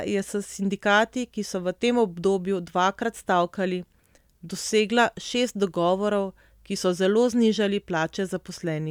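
No technical faults can be heard anywhere in the speech. Nothing in the recording or playback chain draws attention to itself at any moment.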